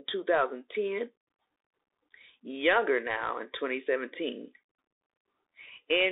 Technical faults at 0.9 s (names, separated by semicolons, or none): Bluetooth CVSD headset codec